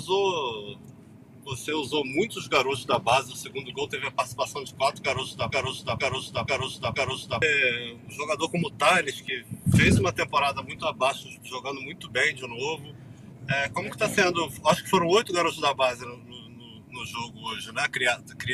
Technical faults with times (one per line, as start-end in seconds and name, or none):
5.51-7.42 broken-record loop